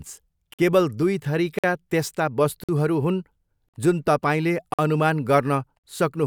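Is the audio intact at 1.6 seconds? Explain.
No. A gap between chunks cuts the speech from 1.59 to 1.64 s. The audio was delivered in one-second chunks, and about 50 ms of silence sits at this join. Nothing is lost, but the speech stops abruptly, leaving a short hole.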